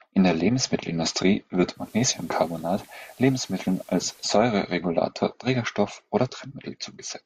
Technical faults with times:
1.72-4.37 digital radio blending to analogue

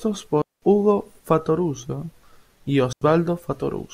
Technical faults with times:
0.42-0.62 digital wireless dropout
2.93-3.01 digital wireless dropout

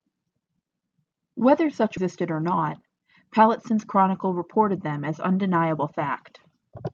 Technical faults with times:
1.97-1.99 skip ahead
2.61-3.72 jitter buffer speed-up

